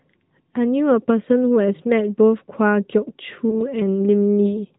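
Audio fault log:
throughout, AMR narrowband mobile codec: The speech went through a mobile narrowband codec. Its 8 kHz sampling removes everything above 4 kHz, giving a boxed-in, telephone sound. It models the voice from a handful of pulses per 5 ms, which leaves a plainly buzzy, synthetic edge that fits a mid-rate mode near 10.2 kbps.
3.50 to 3.76 s, lost AMR speech frames: A radio error corrupted a speech frame, consistent with a single lost 20 ms frame. The decoder filled the gap by reusing the last good pitch and vocal-tract settings at lower gain. This causes a short dip or warble, and the voice is weak or rough for a moment until it settles.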